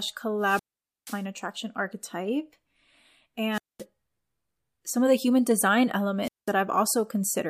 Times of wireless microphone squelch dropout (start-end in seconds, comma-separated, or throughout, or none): 0.41-1.25, 3.52-3.84, 6.22-6.52